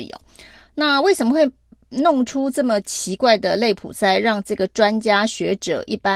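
No faults found; the speech carries only the light coding texture expected from Opus voice compression running in hybrid mode with the full band intact.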